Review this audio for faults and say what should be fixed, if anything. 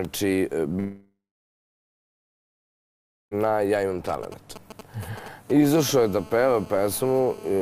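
From 0.79 s to 3.34 s the sound stops. There is a brief fading buzz or hiss, then about 2.15 s of silence. The audio resumes with about 2.5 s missing. This is likely a long network dropout. Use a steadier connection or more jitter buffering.

From 4.09 s to 5.75 s, GSM signalling bursts appear. They are galloping groups of short 217 Hz buzzes, roughly 15 dB below the audio. A nearby 2G phone's radio pulses are being rectified. Keep phones away from the audio gear.

From 5.77 s to the end, a steady GSM phone buzz follows. It is a raspy, harmonic-rich 217 Hz tone, about 22 dB below the audio. A nearby phone is now in a call. Shielded cabling and distance will prevent it.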